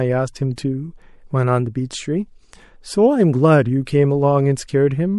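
Pre-echo occurs at 0.56 to 0.58 s and again at 3.85 s, where hiss about 19 dB and 12 dB above the floor smears ahead of attacks because the codec's roughly 36 ms transform block never switched to short blocks.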